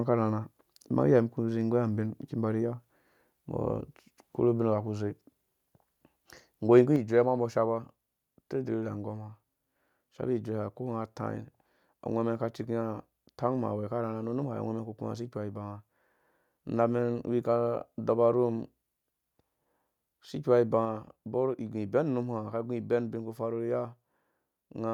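At 6.77 to 6.80 s, microphone overload: peaks exceed the converter's limit by about 2 dB, probably from excessive input gain, so a small share of samples flatten into a harsh crackle. The waveform shows squared-off tops, and the spectrogram shows a brief broadband smear.

At 6.96 s, microphone volume stepped down: the level drops about 5 dB in one step, likely software lowering the input after that peak. The waveform envelope shrinks abruptly, and the whole spectrogram dims at once, including the background.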